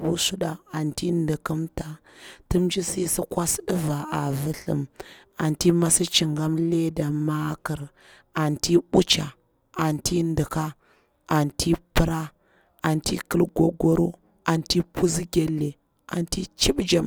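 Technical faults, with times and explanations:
11.50 to 15.48 s, periodic USB or driver dropouts: roughly every 2 s the speech briefly drops out, a couple of milliseconds each, around three times, leaving little ticks. Something is stalling the USB bus or audio driver on a fixed schedule, and the gaps get filled with silence.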